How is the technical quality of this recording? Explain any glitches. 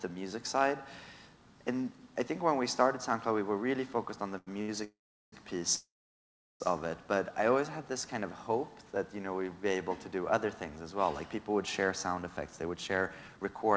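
The recording has three kinds of network timing fault, bunched between 4.38 and 6.62 s and again near the end. The audio has nothing above 8 kHz, which fits a wideband call codec such as G.722 at 64 kbps.

Short stall from a late packet, at 4.38–4.49 s and 4.62–4.70 s: a packet came late and the jitter buffer emptied. The receiver held the last sound for 87 ms and then 66 ms before resuming at the same point. Each stall is a brief smeared hold with a faint buzz or dip, and nothing is lost.

Call audio freeze, at 4.84–5.34 s and 5.76–6.62 s: the sound stretches into a fading buzz or hiss and then goes silent, for about 0.39 s and 0.74 s. The likely cause is packets held up in transit, so the buffer ran dry until they arrived. The audio then picks up where it stopped, adding 480 ms and 839 ms of delay.

Jitter buffer speed-up, at 11.84–13.63 s: after the earlier delays the buffer held too much audio. 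The receiver trimmed many short pitch-period slices, roughly 0.2 s in total, so the audio plays at 112 % speed with unchanged pitch and sounds hurried.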